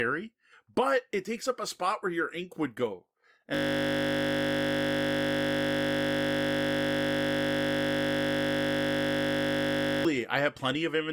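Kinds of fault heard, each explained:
System hang loop: After "your ink would go", a 20 ms buffer repeats exactly from 3.55 to 10.05 s, freezing the speech into a steady 50 Hz buzz.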